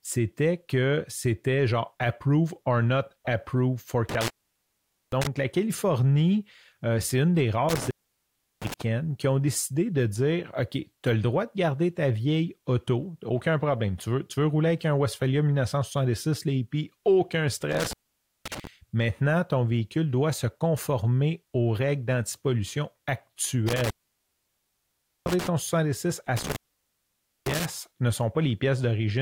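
The speech drops out five times, and each one sounds like intermittent contact: a loose plug or cable briefly opening the line. First at 4.09 to 5.27 s, open for about 0.84 s, then 7.69 to 8.82 s between "euh c'est une des" and "qui ont décidé de" (0.71 s), 17.72 to 18.67 s (0.53 s), 23.68 to 25.47 s (1.36 s), and 26.37 to 27.65 s (0.90 s). Each gap has crackle at its edges, with faint hiss left while the connection is open.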